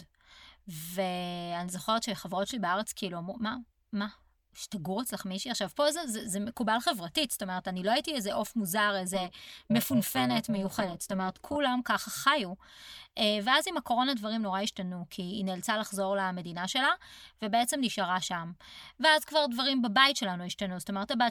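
From 9.13 s to 11.56 s the speech carries overlap-add ripple: the frames were rejoined with an overlap whose gains do not sum flat, so level swings by about 11 dB once per frame, around 400 times a second, giving a metallic buzz with extra tones around each note.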